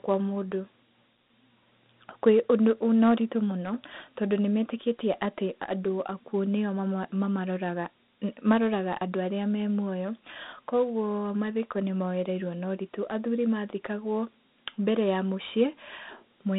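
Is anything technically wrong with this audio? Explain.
Yes. Throughout the speech, a gritty, granular hiss rides on every syllable and follows the level of the talking. The sound is thin and boxy, with little below about 150 Hz and nothing above 3.8 kHz. This is Dialogic VOX ADPCM, the telephone-system codec. Each sample is coded as a coarse 4-bit step from a prediction, and that quantisation error tracks the signal and produces the grit. The narrow band and plainly audible damage fit a 32 kbit/s stream.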